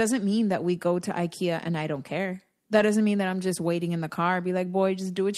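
Just after "and I" at 1.95 s, and again before "doesn't mean that I'm" at 2.79 s, a lost packet rebuilt from error correction leaves a brief 20 ms rough, noisier patch with no gap. On a spectrogram it shows as a smeared, grainier slice; the waveform has no dropout.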